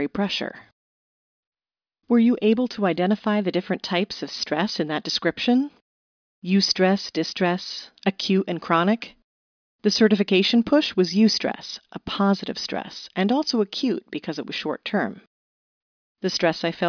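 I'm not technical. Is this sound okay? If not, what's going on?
Yes, this sound is okay, and there's nothing going on with it.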